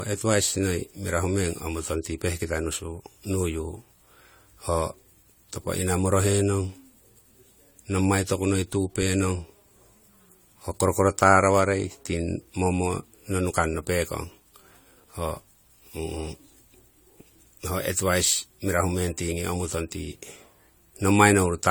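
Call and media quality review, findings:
Generation loss, throughout the speech. Swirly, hollow timbre with smeared consonant attacks, beyond what a single encode would give. Likely repeated AAC-LC re-encoding, around four passes, consistent with 64 kbit/s; each pass re-quantises on a shifted frame grid, stacking noise and spectral holes.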